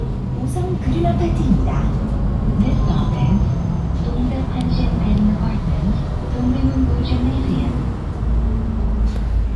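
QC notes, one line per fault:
No faults to note.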